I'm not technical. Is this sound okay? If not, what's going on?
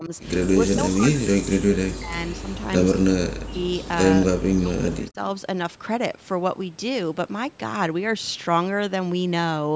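No. Speech suppressed in double talk shows up at 0.0, 0.65 to 2.19, 2.4, 3.01, 3.3 to 3.66 and 4.33 to 5.19 seconds. In those spots the voice sinks, sometimes only a little and sometimes almost to silence, for the longest stretch around 0.65 to 2.19. The likely cause is the call's echo canceller: both people were talking at once, it couldn't tell this voice apart from the other side's echo, so it turned everything down.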